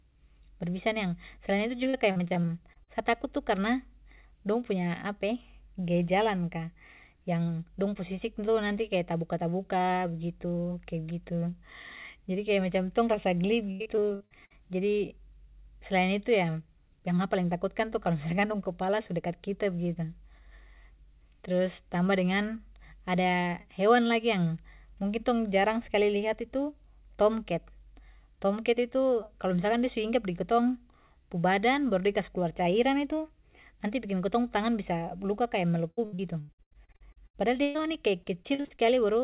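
From 1.84 to 2.89 s, again from 13.71 to 14.55 s, and most heavily from 35.91 to 38.81 s, the speech turns choppy. It breaks into a rapid stutter with fragments smeared or missing. This is repeated packet loss (robotic sound): audio arrived late or not at all again and again, and each hole was patched by extending the preceding sound. Roughly a quarter to two-fifths of each stretch is this filler, with single gaps lasting up to 118 ms. Across the whole clip nothing is heard above 4 kHz, which fits a narrowband call codec such as G.711.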